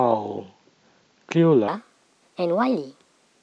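A wrong sample rate fault runs from 1.68 s to the end. The samples play back faster than they were captured, with no conversion, which fits 16 kHz material played at 22 kHz. The speech rushes at 1.38 times speed and rises 5.55 semitones, sounding high and hurried.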